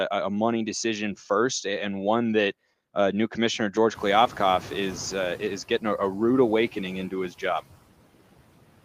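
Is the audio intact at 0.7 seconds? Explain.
No. Noise suppressor artifacts run through the whole clip, including 0.7 s. Frame by frame, the suppressor pulls down every frequency band it judges to be steady noise, by about 18 dB, so the background sinks in the gaps between words and swells back up beneath them.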